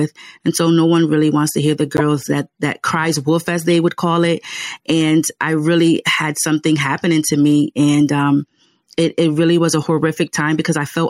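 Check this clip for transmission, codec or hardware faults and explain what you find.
Four short glitches break into the speech, each heard as a quick chirp, squeak, blip or noise burst, from a corrupt frame decoded. They fall at 1.97 to 2.01 s, 3.71 s, 7.30 to 7.32 s and 10.27 s. The first is the loudest, and each later one is weaker. Flipped bits in a compressed frame were played back anyway, so misread gains or codes spread energy into the wrong frequencies for a couple of frames, two or three at 7.30 s.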